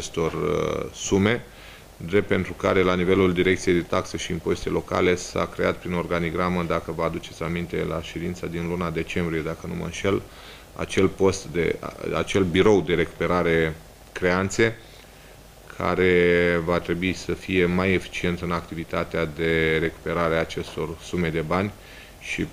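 At 4.63 s a deep, dull thump cuts into the audio and is gone by 4.68 s, dying away within about 12 ms and peaking around -23 dBFS. This is a phantom power thump: the supply feeding the input was switched while the channel was live, and the sudden voltage step passed through the coupling capacitors as a low-frequency pulse before they settled.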